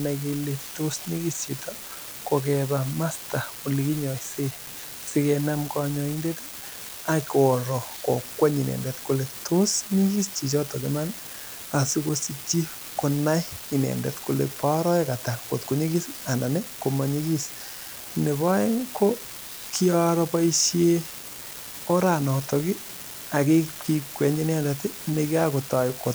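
Throughout the speech, an unreliable data bit flips at random, adding equal spikes of about -26 dBFS: a constant fizzy crackle that, unlike clipping, persists through pauses.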